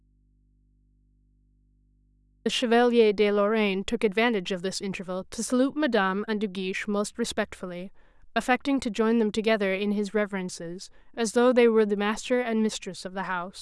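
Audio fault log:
0.00–2.46 s, audio dropout to a faint residue: the speech is already missing when the clip opens, leaving only a low mains hum roughly 40 dB below the signal, then the speech cuts in abruptly. Likely the signal path broke while the input stayed live.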